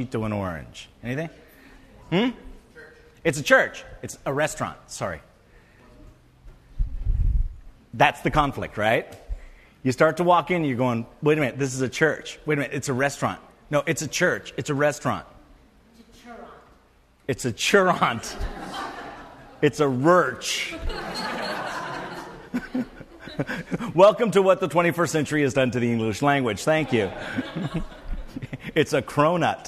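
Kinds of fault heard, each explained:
No technical faults can be heard anywhere in this audio, so there are no kinds of fault to list.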